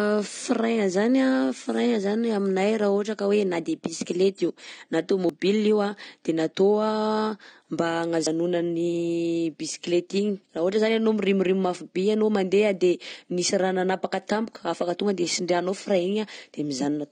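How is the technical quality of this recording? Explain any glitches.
The technical quality is poor. Compression damage is plainly audible across the whole clip, and the speech skips three times.

The first fault runs throughout and sounds like AAC compression, likely AAC-LC at a low rate. The damage fits a bitrate around 32 kbps. The encoder spends too few bits on each frame. It cuts the top of the spectrum and quantises the rest coarsely. The speech sounds dull and smeared, with a fizzy, warbling edge on sibilants.

The second fault is a dropped buffer (overrun), heard at 5.29 s, 8.27 s and 14.56 s. The likely cause is software failing to collect its samples before the hardware overwrote them. The lost piece is simply missing, and the audio on either side is joined directly. There is no gap of silence. Each one is a sudden jump. At 5.29 s, between "de bisikleta io na" and "io an", about 50 ms vanishes. 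At 8.27 s roughly 70 ms goes. At 14.56 s, just after "de nisy raha nanapaka", only about 20 ms is lost.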